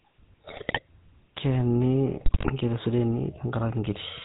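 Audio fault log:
Throughout: GSM full-rate codec. The speech has a plainly audible buzzy, gravelly roughness and nothing above 4 kHz, because the codec rebuilds the voice from a vocal-tract filter excited by sparse, regularly spaced pulses, which fits a 13 kbps full-rate stream.
0.48–0.80 s and 2.18–2.50 s: GSM bit errors. In each of these windows, roughly a third of a second long, the voice breaks into squawks, pops and gargling. Corrupted filter, pitch and gain parameters reach the decoder, so the spectrum is bent and the level jumps frame by frame.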